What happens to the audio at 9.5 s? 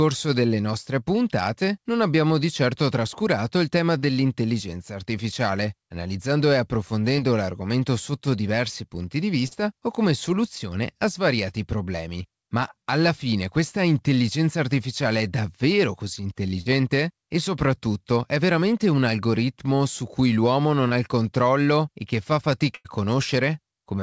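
At 9.48 to 9.53 s there is a short concealed packet loss. About 40 ms of the call arrived too late to decode. The receiver filled 33 ms by extending the preceding sound, then blended back into the real audio. The result is a brief smear.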